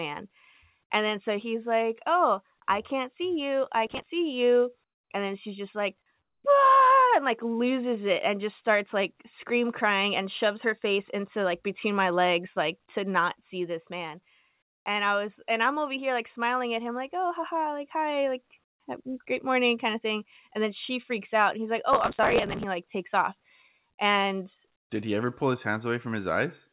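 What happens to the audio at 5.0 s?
Between 4.84 and 5.1 s the real background drops out and a flat, featureless hiss, about 19 dB quieter, fills the gap right before "and then she's just". That's most likely comfort noise in place of the background: the sender paused transmission and the receiver synthesized filler noise.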